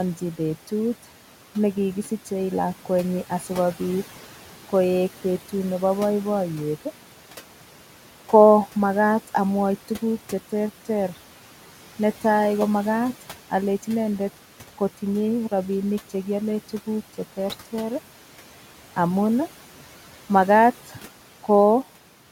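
Noise suppressor artifacts run throughout: the suppressor pulls the room noise, sitting about 17 dB below the speech, down by about 12 dB between phrases, so the background pumps up under the speech. At 2.03 to 2.27 s and 20.86 to 20.99 s, speech is cut by the noise suppressor. Roughly 0.1 s and 0.15 s of speech are misread as noise and dropped by up to about 8 dB and about 9 dB respectively, leaving those sounds faint and swallowed.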